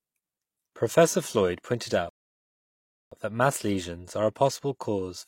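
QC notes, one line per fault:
2.09–3.12 s, rebuffering stall: the speech halts and drops to complete silence for about 1.02 s, then picks up cleanly with "that mass lesions are" at exactly the point where it broke off. The playback buffer ran dry and the player waited for more data before continuing. No audio is skipped or repeated; the gap simply inserts dead air, lengthening the clip by roughly one second.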